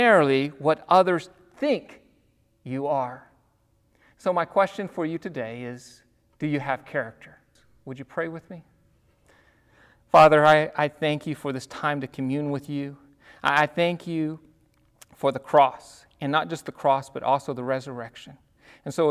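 No technical faults can be heard anywhere in the speech. There is nothing here to place on a timeline or trace back to a cause.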